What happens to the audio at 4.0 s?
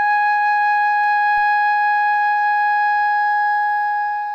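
At 4.0 s the music plays through intact, with no dropout, click or distortion at that point.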